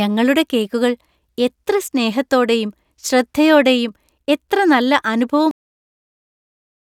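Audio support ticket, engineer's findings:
Cut-off end at 5.51 s. Speech stops mid-sound and drops to digital silence, no decay. Final buffers never written or played out. Check capture stop or file finalisation.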